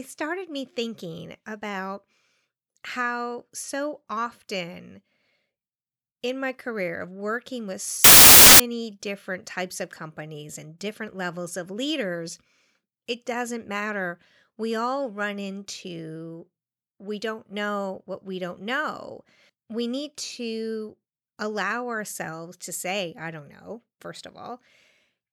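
From 8.04 to 8.60 s the speech turns into loud, harsh broadband noise: samples built from the wrong bytes, with low-order bits misread as the large part of each value. The waveform fills with dense noise, and the spectrogram shows a broadband block.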